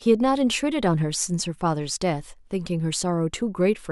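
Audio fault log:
No fault is heard anywhere in this speech clip. There is nothing to log for any moment of it.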